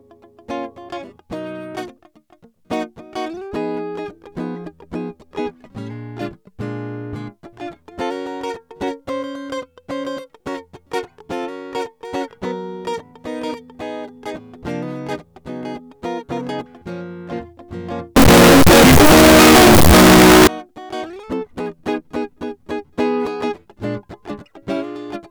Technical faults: float read as integer

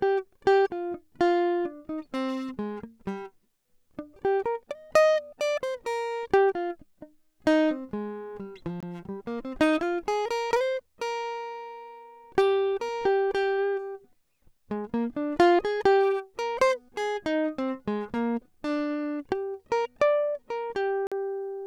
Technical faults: Bluetooth dropout

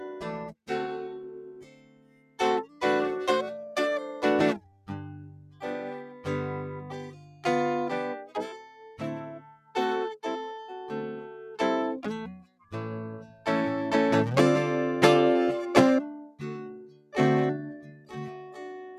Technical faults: noise suppressor applied to music or sounds; sound cut by the noise suppressor

